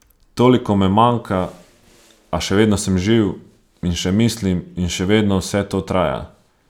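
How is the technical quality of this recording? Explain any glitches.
No technical faults are audible anywhere in the recording.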